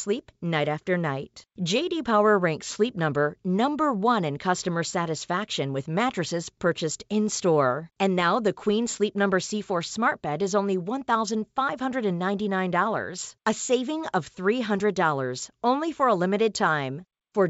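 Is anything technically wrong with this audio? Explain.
No, nothing is wrong: the speech is carried over G.722 wideband telephone coding at 64 kbit/s, with the band reaching up to about 7 kHz and at most a faint coding texture, which is that codec working as intended.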